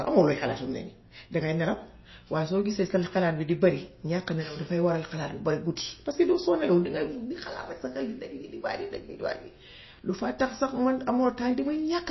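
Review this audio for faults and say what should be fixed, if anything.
Throughout, the speech stops dead above 5.8 kHz and has a plainly audible watery swirl, likely from MP3 compression at a starved bitrate fitting about 24 kbps. Weak frequency lines flicker frame to frame, which a steady low-pass filter wouldn't cause. Encode at a higher bitrate or keep a lossless master.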